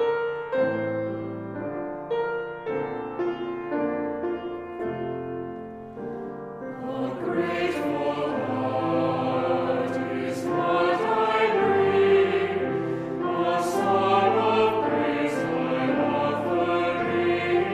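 Nothing is technically wrong with this audio.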